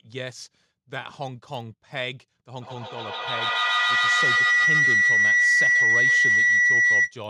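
A feedback howl begins at 2.52 s: the microphone picks up its own loudspeaker output and each pass round the loop comes back louder. The speech narrows into a tone around 2 kHz, repeating roughly every 150 ms and peaking about 13 dB above the speech until 7.18 s.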